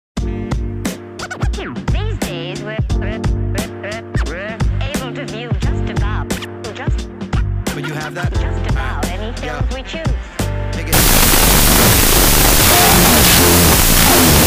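From 10.93 s to the end, the audio falls apart with a wrong sample width: data written as 16-bit integers are read as unsigned 8-bit. Each original sample is split into two bytes treated as separate values, so the material plays at half speed, an octave low, while every low byte turns into loud, harsh noise. A plain sample-rate error would slow the sound just as much but leave it clean. Here the slowed original is buried under that noise.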